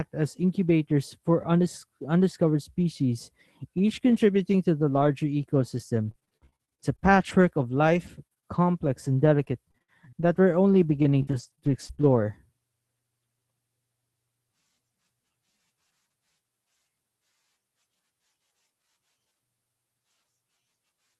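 Right after "each contributing to the", the speech turns choppy from 4.97 s to 12.23 s, with about thirty short holes, none longer than about 59 ms, scattered through that stretch. This is repeated packet loss: packets kept going missing, and each hole was papered over by stretching the preceding sound. Roughly a tenth of the span is synthetic fill, and the concealment smears into about a second and a half of rebuilt audio, giving a choppy texture with pieces missing.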